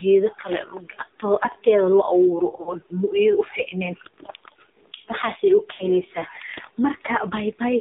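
AMR narrowband mobile codec damage runs through the whole of this speech recording. The sound is confined to a telephone band of roughly 250 Hz to 3.7 kHz, so everything above is simply gone. The codec rebuilds the voice from a vocal-tract model fed with a handful of pulses, and at this low rate the result is plainly buzzy and synthetic, consistent with a rate around 7.4 kbps. Lost AMR speech frames then strike from 2.50 to 2.74 s. Frames failed their checks, and the decoder filled each gap by repeating the last good pitch and filter settings at reduced gain. Here the losses are scattered over about 160 ms, about 80 ms missing in all, with no single gap longer than 40 ms, so the sound warbles and dips repeatedly rather than fading out. A second burst of lost AMR speech frames at 5.74 to 5.86 s, about 60 ms, gives a dip before the voice recovers, briefly rough.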